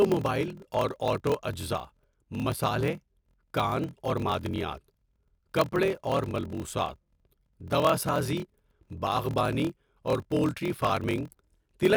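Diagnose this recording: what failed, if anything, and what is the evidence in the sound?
A block size mismatch (padded) at the driver or buffer stage runs through the whole recording. A steady buzz near 41.7 Hz sits under the speech, which plays at 0.889 times normal speed with its timbre intact, which fits 1024-sample writes zero-padded into larger read blocks.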